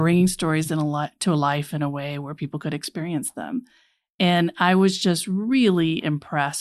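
Nothing in this speech recording stands out as a technical fault at any point along the way.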